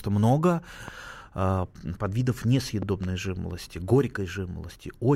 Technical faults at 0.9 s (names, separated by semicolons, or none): loud pop